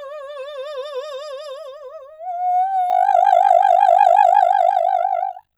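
From 2.9 s to the end, the music carries overlap-add ripple. Frames were rejoined with overlaps that do not sum evenly. The level swings by about 60 dB around 50 times a second. It sounds like a harsh, buzzing, robotic tremolo.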